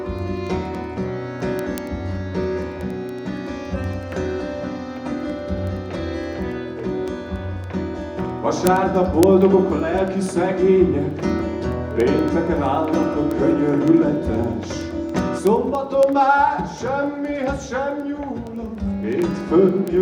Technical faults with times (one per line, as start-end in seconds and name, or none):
0.19-19.97 word clock ticks
5.12 compressed frames skipped